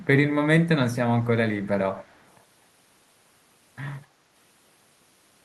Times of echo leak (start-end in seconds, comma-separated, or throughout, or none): 0.00-0.05, 1.64-1.68, 1.95-2.36, 4.02-4.07